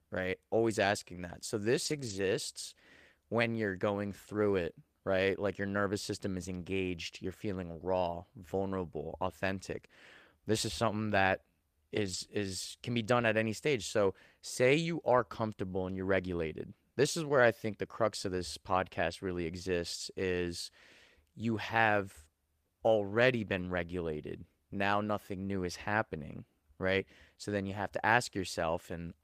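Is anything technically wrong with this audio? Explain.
Yes. The speech has several brief stretches of lost packet rebuilt from error correction, at 1.85–2.19 s (180 ms), 8.11 s, 11.11 s, 12.05–12.15 s, 17.29–17.31 s, 19.11–19.13 s and 23.57–23.67 s. Each lost packet was replaced by a low-bitrate copy carried in the following packet, so nothing drops out. Those frames sound rougher and noisier than the surrounding speech. The longest patch points to several separate packets recovered.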